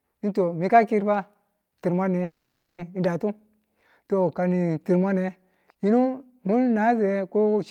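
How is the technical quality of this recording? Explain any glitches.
One glitch stands out: a call audio freeze from 2.23 to 2.80 s. The last sound is drawn out as a fading buzz or hiss for about 550 ms, with roughly 60 ms of silence, then the speech resumes where it stopped, nothing lost, just delayed. Packets were likely held up in transit, emptying the jitter buffer.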